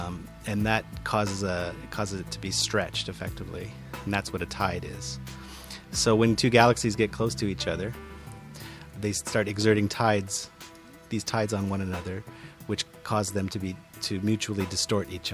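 Nothing technically wrong turns up anywhere in this audio, so there's no fault to point to and no cause to chase down.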